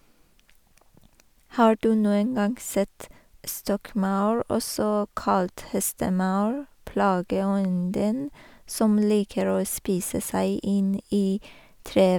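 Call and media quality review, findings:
No call or media quality findings to report for this recording.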